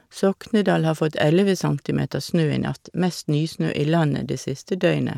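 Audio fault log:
2.26 to 3.68 s, Bluetooth SBC bit pool drop: for about a second and a half the top end goes dull and a gritty, grainy noise creeps in under the speech, then clears once the rate recovers. That's what you get when the encoder runs short of bits: the highest sub-bands get little or nothing and the rest are quantised coarsely. The sound fits the bit pool falling from 31 to 15, around 105 kbps.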